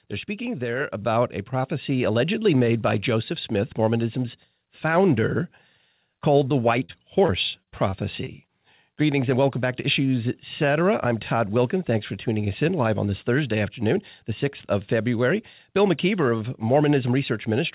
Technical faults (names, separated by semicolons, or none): microphone volume stepped up; repeated packet loss (robotic sound)